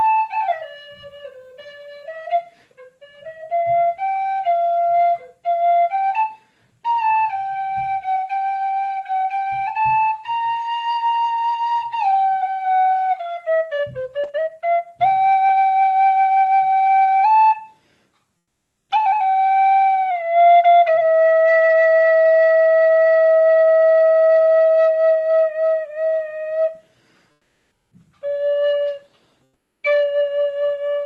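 At 27.31–27.91 s and 29.47–29.83 s, comfort noise replaces the background, likely from Opus DTX: a smooth, featureless hiss rather than the dead silence of a dropout.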